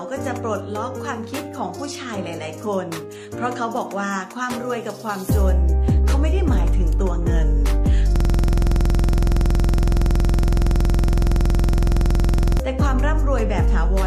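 From 8.16 to 12.60 s a system hang loop takes over: the machine froze while the sound hardware kept replaying one 46.44 ms slice, which fits a 2048-sample buffer, about 96 times. Each cycle is identical, so the result is a rigid 21.5 Hz rattling buzz, unlike a stutter that moves on.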